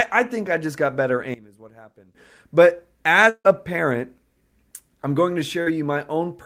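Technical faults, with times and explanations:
1.34 to 2.15 s, one channel inverted: just after "I just got better", the speech drops by about 19 dB and turns faint for roughly 0.8 s, with the centred body of the voice largely gone. This is likely a polarity flip on one stereo channel during this stretch. When the channels are summed to mono, everything common to both cancels, so only their small difference remains audible.
3.29 to 3.47 s, long network dropout: the speech breaks off and the last sound carries on for about 150 ms as a fading buzz or hiss, followed by roughly 60 ms of silence before the speech resumes. This is likely a gap of about 160 ms in which no audio arrived. The receiver stretched the final fragment to cover the hole, then gave up and went quiet. The missing stretch is never recovered, so the speech resumes with that part absent.
5.63 to 5.68 s, short concealed packet loss: right after "I'm going to", a brief smear of about 40 ms is heard. 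Audio for that interval did not reach the decoder in time. The receiver extrapolated the preceding sound for about 35 ms and cross-faded back into the real signal, which leaves a short wobble in place of the original detail.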